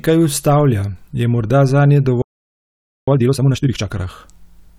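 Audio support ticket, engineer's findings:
Playback stall, 2.22 to 3.08 s. Speech cuts out right after "ustavlja je morda zanje". Output silent for about 0.86 s, then resumes. Probable component: player buffer or audio thread. Likely cause: buffer underrun, decoder starved of data, or a blocked playback thread. Nothing reached the output device until refill.

Time-compressed catch-up, 3.08 to 3.92 s. Speech immediately after the gap runs at 2x speed. Pitch stays normal. Component: player's latency-recovery logic. Mechanism: backlog from the stall trimmed by cutting small segments and cross-fading the joins. Normal pace returns at 3.92 s.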